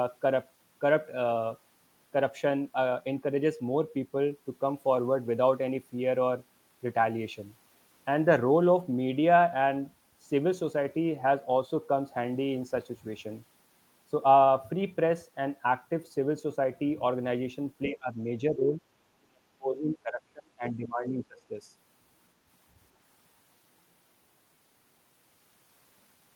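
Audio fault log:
17.88–18.19 s, 18.50–18.81 s and 19.20–21.58 s: speech suppressed in double talk. The speech dips by about 20 dB, then about 10 dB, then about 30 dB over roughly two seconds, likely an echo canceller mistaking overlapping far-end talk for echo and turning the near talker down too.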